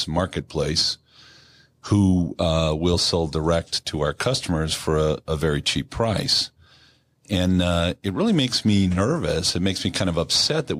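Nothing in this speech recording stands out as a technical fault.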